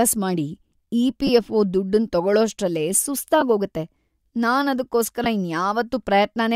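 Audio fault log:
1.27–1.29 s (just before "ದುಡ್ಡನ್ ತಗೊಳೋಷ್ಟ್ರಲ್ಲೇ"), 3.41 s (just after it), 5.24–5.26 s: lost LE Audio frames. The LC3 decoder fills each 10 to 20 ms gap by repeating the previous spectrum with scrambled phase, so you hear a brief noisy smear rather than the clean silent hole of an ordinary dropout.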